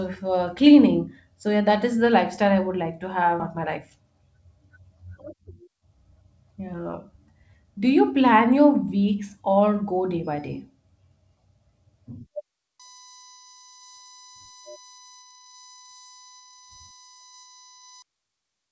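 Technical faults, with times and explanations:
3.4 s, skip ahead: right after "I would like to", playback leaps straight to "my life" with no gap, so roughly 0.7 s of the speech is simply gone and the two sides butt together almost seamlessly. That stretch was dropped, either on the way or by the overflowing jitter buffer, while later audio was already waiting, which explains why nothing fills the hole and the jump lands cleanly on later material.
5.27–6.90 s and 7.63–8.12 s, jitter buffer speed-up: the speech sounds rushed at unchanged pitch, about 11% faster in the first run, shedding roughly 0.2 s, and about 7% faster in the second, shedding a few tens of milliseconds, just before "plan your weeks or". The buffer was holding more audio than its target, so it repeatedly trimmed tiny pitch-period slices to catch up.
12.79–18.02 s, USB whine: a steady, thin whine sits under the speech at about 25 dB below it, pitched on a 1 kHz series with its strongest component at 6 kHz, and it stays fixed in pitch throughout that span. 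The USB bus's 1 ms frame timing pulls current in regular bursts that leak into the audio through power or ground, which is why the whine follows a 1 kHz pattern. It is heard through the G.722 call path, which passes nothing above 8 kHz.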